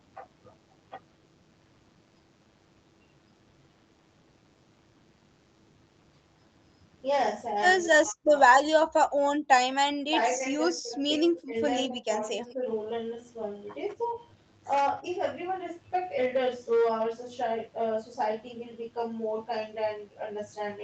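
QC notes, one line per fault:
Throughout: DECT cordless phone buzz. A thin, steady 100 Hz buzz with many harmonics sits about 40 dB below the speech. A nearby DECT unit's radio bursts get rectified into the audio.
Throughout: hard clipping. Peaks are driven about 8 dB past the limit and cut flat. Roughly one percent of samples clip, adding crackle on loud syllables.
7.87–8.33 s, 8.69–9.09 s, 10.06–10.42 s, 10.74–11.0 s, 11.22–11.56 s, 11.87–12.67 s, 15.01–15.05 s: speech suppressed in double talk. The speech dips by as much as about 40 dB, then by about 20 and 15 dB, with a slight dip near 15.0 s. Likely the echo canceller ducking during simultaneous talk.
9.38–9.49 s: background gated by the echo canceller. Room sound drops about 40 dB for roughly a tenth of a second. The canceller clamps the microphone while the loudspeaker plays, then releases.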